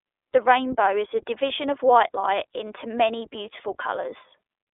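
Across the whole speech clip the iLBC codec is plainly audible. The band sits roughly between 300 Hz and 3.6 kHz, with nothing above 3.8 kHz, and the speech takes on a rough, slightly synthetic grain. That grain, which fits 20 ms frames at about 15.2 kbps, comes from each frame's excitation being coded on its own. A simple telephone band-limit would dull the sound without adding this frame-rate roughness.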